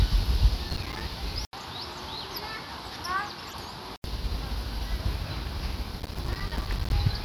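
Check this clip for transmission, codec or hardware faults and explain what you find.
Three kinds of fault are present: two bursts of crackle, a stretch of duller, quieter input, and one brief decoding glitch.

From 0.69 to 1.01 s and again from 6.0 to 6.92 s, a gritty crackle of tiny dropouts is processor overload crackle. Missed deadlines leave silent gaps, roughly twenty and then fifty of them, which fits buffers of about 5 ms.

From 1.45 to 4.04 s, after an 80 ms silence, the sound turns dull, about 10 dB quieter, with nothing above 12.9 kHz and new noise about 30 dB down. The likely cause is an input switched to a poorer device.

From 3.47 to 3.53 s, a short glitch is a corrupt frame decoded. Damaged bits in about two frames put energy at the wrong frequencies.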